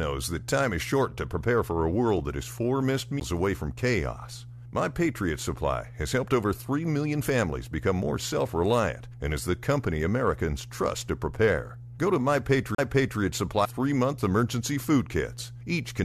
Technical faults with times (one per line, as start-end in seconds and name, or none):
0.00-16.05 mains hum
3.20 CD skip
12.75-12.78 CD skip
13.64-13.66 stream segment skipped